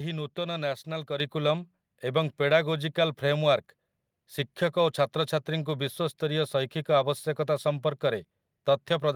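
At 1.2 s the microphone volume is stepped up: the input level on the capture device was raised in a single jump of about 6 dB, most likely by automatic gain control in the call software reacting to a quiet signal. The speech and the room noise beneath it get louder together at that instant, with no fade. On a waveform the envelope widens abruptly at that point, and a spectrogram shows every band brightening evenly, noise floor included.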